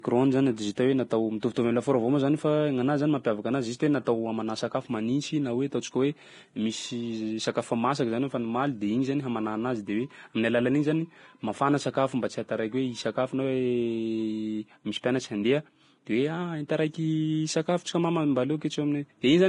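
Throughout the speech, treble sounds hissy and grainy, with nothing above 10.5 kHz. A spectrogram shows a hard ceiling and speckled upper bands, likely Vorbis compression near 30 kbps.

From 1.54 to 1.56 s, pre-echo smears a short hiss ahead of "am'lafaoro avao moa zany", visible as a 26 ms noise smudge before the onset on the waveform.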